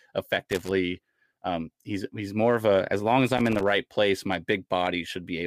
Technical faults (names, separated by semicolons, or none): loose connector crackle